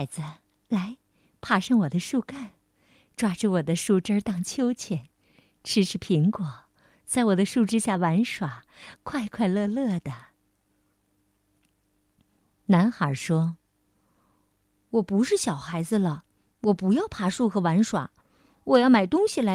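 Nothing technical stands out in this speech recording, so there's really no fault to point to here.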